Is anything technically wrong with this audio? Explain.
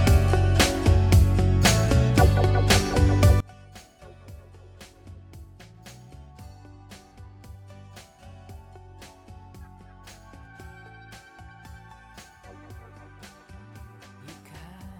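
Yes. From 3.40 s to the end, the sound collapses to a faint residue about 27 dB quieter, with the centre nearly gone. The likely cause is one channel inverted: with one stereo channel's polarity reversed, the content shared by both channels cancels when they sum to mono, leaving only their difference. A plain gain drop or dropout would shrink everything evenly, but here the centred material disappears while a faint trace of the mismatch between the channels remains.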